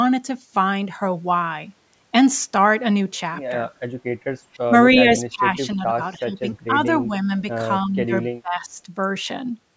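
From 4.46 s to 8.79 s the talker keeps ducking out in chunks: 4.46–4.73, 4.93–5.46, 5.67–6.01, 6.17–6.46, 6.67–6.78, 7.02–7.44, 7.85–8.12 and 8.42–8.79 s. The first dip goes deepest, about 25 dB, and later ones sit around 10 to 20 dB. That's likely speech suppressed in double talk. With both ends talking at once, the echo canceller couldn't pull the talker apart from the loudspeaker echo, so it pushed everything down together.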